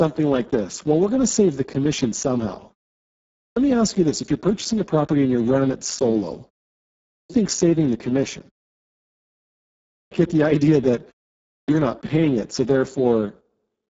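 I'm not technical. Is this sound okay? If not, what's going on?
No. Two problems are audible.

The first runs through the whole clip. The speech has been squeezed through the Speex codec, an old voice-compression method from internet calling and game chat, at a very low quality setting. Too little detail survives to rebuild the voice properly, so it comes out rough, hoarse and noisy, with a buzzy, somewhat robotic edge. The crisp top end is also missing: sibilant sounds are dull or filled in with hiss.

The second is a clipped start after a pause, which happens four times: at 3.34 s, 7.06 s, 9.87 s and 11.45 s. Each time the speaker has just paused for about half a second to a second and a half. The playback equipment seems to drop into a low-power state during the silence, and it takes roughly a quarter of a second to come back. The beginning of the next phrase is lost, so speech jumps in abruptly with its opening sounds missing.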